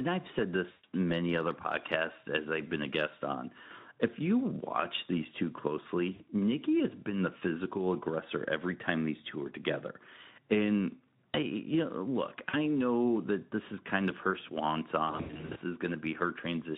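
Around 0.71 s, just after "I've said", the speech smears into a fading, buzzy tone or coloured noise for about 120 ms. That's VoIP packet loss concealed by the speech codec, with the decoder stretching its last pitch. Shorter dropouts hit at 6.13 s and 12.49 s, then scattered losses from 15.07 to 15.61 s after "kind of her swan".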